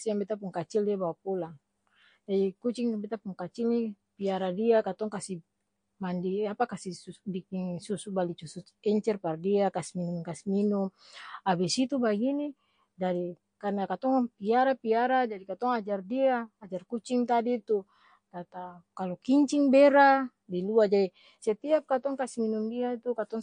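From start to finish the speech carries plainly audible damage of the kind left by MP3 compression, likely from an encoder starved of bits, which fits a low rate around 48 kbps. Nothing survives above 9.8 kHz, so sibilants lose their sheen, and weak detail flickers in and out, giving a watery, swirling texture with chirpy s sounds. On a spectrogram there is a hard ceiling at 9.8 kHz, with patchy, blocky holes speckling the upper bands.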